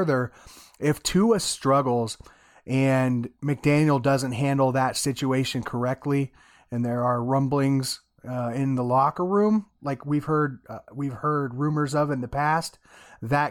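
No technical faults can be heard anywhere in this speech recording. There are no events to place in time, so no times or values apply.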